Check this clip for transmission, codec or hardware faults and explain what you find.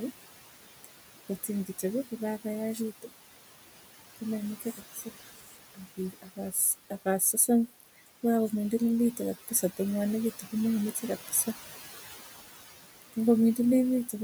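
Noise suppressor artifacts and speech cut by the noise suppressor are present; neither is a transmission, codec or hardware fault. The room noise sits about 13 dB below the speech.

Noise suppressor artifacts run throughout: band-by-band suppression pulls the background down by about 17 dB in pauses, so the leftover noise pumps. On a spectrogram the noise floor appears as blotchy, flickering patches.

Speech cut by the noise suppressor occurs from 1.28 to 3.10 s, 4.59 to 5.08 s and 5.39 to 7.49 s. Quiet speech mistaken for noise drops by up to about 17 dB, leaving faint, swallowed parts that show as missing waveform tails.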